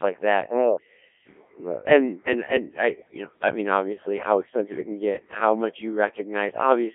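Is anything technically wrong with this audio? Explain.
Yes. Throughout, a Codec 2 vocoder resynthesises the speech from sine waves, consistent with its 1.3 kbit/s mode. Unlike plain telephone-band filtering, it sounds buzzy and robotic.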